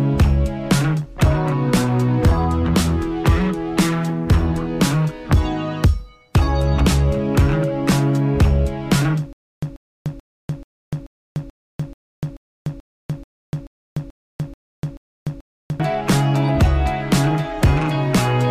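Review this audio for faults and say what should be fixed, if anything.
From 9.33 s to 15.80 s there is a stutter with silent gaps: a 138 ms burst of sound repeats 15 times at a steady 434 ms period, each repeat followed by about 296 ms of digital silence. The likely cause is a playback or stream stall, with each retry replaying the last buffered fragment before running dry again. The audio that should have filled those six and a half seconds is lost. Prevent this by enlarging the playback buffer and making stall recovery resume from the correct position rather than replaying the last fragment.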